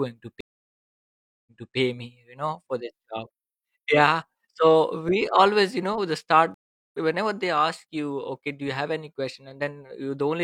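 At 0.41 s the speech drops out in a stream reconnect. The connection broke, and the player sat silent for 1.06 s. It then restarted its decoder mid-stream. Playback resumes at 1.76 s, about 0.3 s earlier than where it stopped, so a short stretch repeats. A second reconnect hits at 6.54 s, after "you know the start". The gap lasts 0.4 s. It resumes at 6.99 s with "whenever they ask you", roughly 0.4 s further on, so some speech is skipped.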